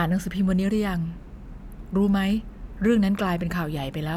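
No faults are audible anywhere in the recording.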